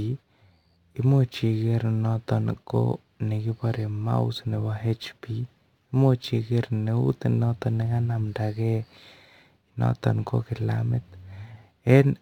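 A gritty, inharmonic fizz rides on the louder and brighter parts of this speech throughout, the sign of crude rate conversion from 48 kHz to 44.1 kHz by nearest-sample picking, leaving error roughly 35 dB down.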